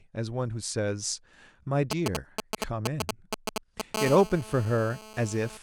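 From 1.91 s to 3.96 s, GSM signalling bursts break into the speech: a galloping dit-dit-dit of short 217 Hz buzzes, roughly as loud as the speech itself. A nearby 2G phone is exchanging short groups of radio bursts with the network, and the audio circuitry rectifies them into sound. Each group carries the 217 Hz burst rhythm. What separates this from a steady phone buzz is its stop-start grouping: the interference arrives in clusters with gaps between them.

At 3.97 s the pattern changes to a continuous GSM phone buzz that lasts until 5.57 s. This hard, raspy 217 Hz tone is about 12 dB below the speech. Its many harmonics come from the sharp edges of the transmitter's bursts after rectification. The buzz does not follow the pitch or rhythm of the speech, and it runs without a break. That unbroken quality points to a phone now in an active call rather than signalling, which sets it apart from the gapped clusters just before.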